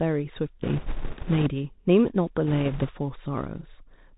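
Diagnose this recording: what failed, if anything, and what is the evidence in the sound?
Throughout, the speech sounds muffled and scratchy over a granular hiss, with nothing above 4 kHz. This is the Bluetooth CVSD headset codec, whose one-bit adaptive steps lag behind sharp high sounds.

From 0.63 to 1.50 s and 2.47 to 2.92 s, a rushing crackle rises with no loud clicks. These are bit errors on a Bluetooth voice link, a few percent, each fading quickly.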